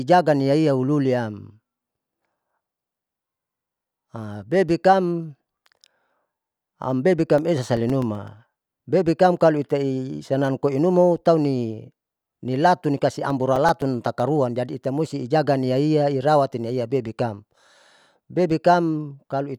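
From 7.38 to 8.28 s and again from 13.30 to 14.20 s, the speech carries CD scratch ticks. Each burst has eight brief ticks, each only a few milliseconds long, about nine per second. A surface blemish defeats error correction on every disc rotation.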